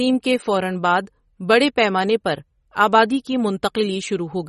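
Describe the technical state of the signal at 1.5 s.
At 1.5 s the speech carries plainly audible coding damage, and this runs through the whole clip. It is likely MP3 compression. The encoder keeps only the frequency lines it judges important and drops weaker ones when bits are scarce. Here nothing remains above 11.8 kHz, so the top of the treble is simply gone. The amount of damage points to a low bitrate, which fits about 32 kbps.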